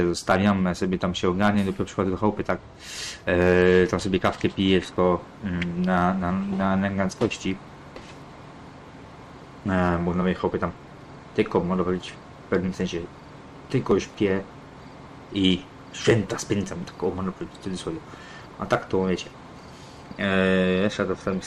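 No technical faults can be heard anywhere in the signal.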